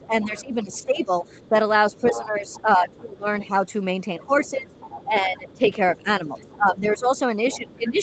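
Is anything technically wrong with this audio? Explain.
Yes. Two linked echo-control faults run through most of the clip.

Speech suppressed in double talk, 0.0 to 3.53 s and 4.18 s to the end: the speech dips repeatedly, by about 15 dB at its deepest, for roughly two seconds in total in the first stretch. It thins and drops out in pieces. The likely cause is an echo canceller that could not tell the near talker apart from loudspeaker echo while both sides spoke, so it turned everything down.

The other side's voice is leaking through at 0.22 to 3.46 s, 4.23 to 5.7 s and 6.37 s to the end. A second, fainter voice sits under the main one, around 15 dB below it at first and about 20 dB below it later. That is likely the far end's loudspeaker playback reaching the microphone and only partly cancelled, the same double-talk situation that triggers the suppression. The whole recording is band-limited at 8 kHz, which fits a call path using Opus.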